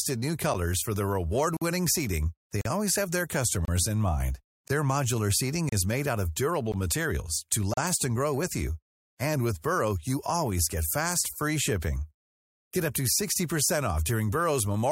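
Gaps between stream segments cut the speech at 0.54, 1.57–1.62, 2.61–2.66, 3.65–3.68, 4.68, 5.69–5.72, 6.72 and 7.74–7.77 s, roughly once per second, which fits 1-second segments whose timestamps don't quite meet. Each leaves a hard-edged silence of 9 to 48 ms, with nothing lost. The waveform drops flat to near silence and the spectrogram shows a blank vertical stripe.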